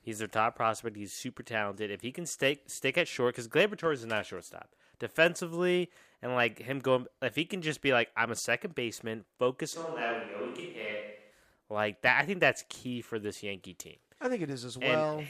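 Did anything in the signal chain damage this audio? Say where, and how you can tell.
Yes, at the capture end. Right after "a second baseman focus", from 9.76 to 11.30 s, the speech turns suddenly roomy and hollow, thinner in the bass, about 5 dB quieter, with background noise rising to roughly 35 dB below the speech. It returns just as abruptly. This is likely a switch to a distant microphone covering a dropout of the close one. A plain gain dip or filter would not add room reflections and extra ambience.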